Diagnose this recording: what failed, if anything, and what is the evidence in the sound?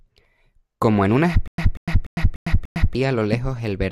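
Stutter with silent gaps from 1.48 to 2.95 s, just after "como en una": a 189 ms fragment repeats five times, each followed by 105 ms of digital silence. This is likely a stalled playback or stream buffer replaying its last block, with the audio in between lost.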